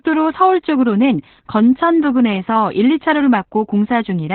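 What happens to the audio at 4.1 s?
At 4.1 s the speech is still inside Opus voice compression, which runs through the whole clip. The encoder has fallen back to its SILK linear-prediction mode at narrowband and codes the excitation very coarsely, which fits a rate near 8 kbps. Nothing survives above about 4.3 kHz, so consonants lose their edge and the speech sounds muffled, hoarse and faintly robotic, with heavy codec damage at this point as everywhere else.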